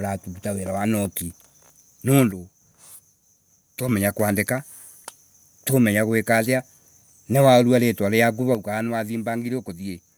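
From 2.31 to 3.89 s, and from 8.55 s after "ni waurwa ritwa riaku" to the end, the speech abruptly falls about 6 dB, likely because one channel drops out.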